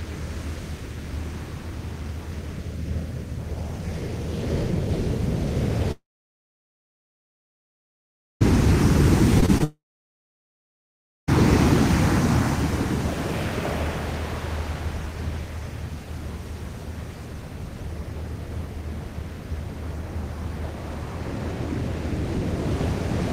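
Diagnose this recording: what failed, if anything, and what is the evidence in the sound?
The audio cuts out twice, from 5.91 to 8.42 s and from 9.64 to 11.29 s. Each gap opens with a short fading continuation of the last sound, then near silence for about 2.4 s and 1.5 s. About 2.5 s and 1.6 s are simply gone. This is a long network dropout, likely from a stall in packet delivery.

Just before the second dropout, brief smears and wobbles appear at 9.40–9.44, 9.46–9.50 and 9.58–9.62 s. Each is short concealed packet loss. About 20 ms of audio failed to arrive, and the decoder extrapolated from the preceding signal before blending back. This places the fault in network delivery.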